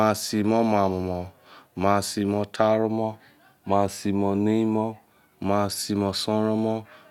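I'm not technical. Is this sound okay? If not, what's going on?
Yes, this sound is okay, and nothing is going on that needs fixing.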